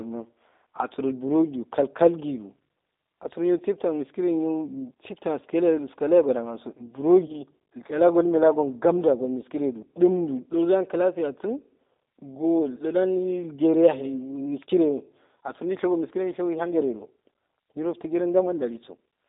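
From start to finish the speech carries G.729 codec damage, plainly audible. Nothing below about 250 Hz or above 3.7 kHz survives, and within that band the voice is rebuilt from a filter, a pitch predictor and a few pulses per frame, which fits an 8 kbit/s coder. That model-based rebuilding, rather than simple band-limiting, causes the slightly rough, synthetic grain. A plain telephone filter would sound narrow but stay clean.

At 7.26 to 7.39 s comes VoIP packet loss concealed by the speech codec. About 30 ms of audio went missing, which fits a single lost packet. The decoder filled the gap by stretching its last pitch and filter settings at falling gain, so the sound turns briefly into a buzzy tone or coloured noise and fades. Because each frame builds on the one before, the voice stays weakened past the gap itself. That smeared recovery separates it from a hard dropout or a click.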